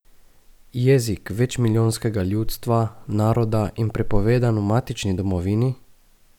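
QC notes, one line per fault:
Nothing to flag here: the speech comes across without a single technical fault to note.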